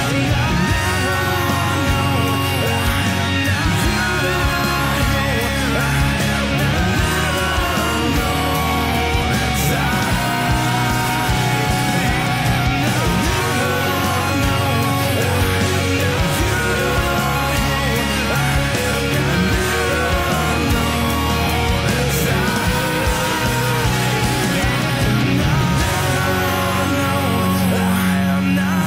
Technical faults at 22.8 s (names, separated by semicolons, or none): USB whine